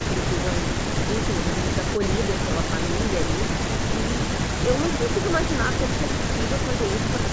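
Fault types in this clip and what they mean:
Nothing stood out as a fault on listening to the speech.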